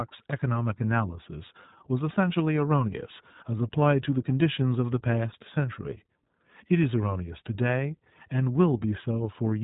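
Speech, passed through the iLBC codec from start to finish. Nothing above about 3.8 kHz survives, so sibilants lose their hiss and the sound is muffled and narrowband. The codec damage is plainly audible as a rough, slightly synthetic edge on every phrase. iLBC codes each short frame's excitation independently of the last. The texture here fits 20 ms frames at around 15.2 kbps, the codec's higher-rate mode.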